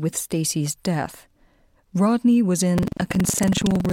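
From 2.74 s to the end there's buffer tearing: writer and reader have slipped, so a small slice of each period replays speech from roughly a tenth of a second earlier. That hard splice gives a robotic rattle at 21.5 Hz, which fits a 2048-sample buffer.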